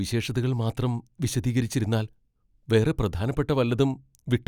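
No technical faults can be heard anywhere in the recording. The speech runs on without any break, gap or added disturbance.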